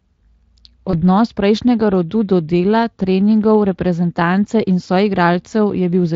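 Speech with a single VoIP packet loss concealed by the speech codec at 0.91 s, lasting to 1.03 s: about 20 ms of audio went missing and the decoder extended the preceding sound as a fading buzzy tone or coloured noise. Unlike a plain dropout, there is no silence or click. The weakened, smeared sound lingers well past the gap because each rebuilt frame leans on the last. The Speex coding around it carries only light damage.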